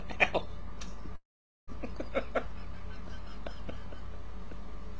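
Audio carried over a wideband call path, with nothing above 8 kHz, which fits G.722. A call audio freeze runs from 1.16 to 1.70 s: the sound stalls, a brief fading fill gives way to about 0.45 s of silence, then resumes where it stopped, losing nothing but arriving 0.52 s later. Likely cause: delayed packets emptying the jitter buffer.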